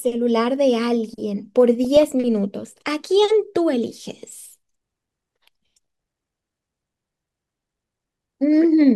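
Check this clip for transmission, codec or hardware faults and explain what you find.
DAB burbling occurs twice in the speech, from 1.84 to 2.12 s and from 5.81 to 6.03 s. Weak reception lets bit errors, around 0.3 percent, slip past error correction. Corrupted scale factors make single sub-bands jump in level. The result is short blips of noise and sudden level jumps in parts of the spectrum.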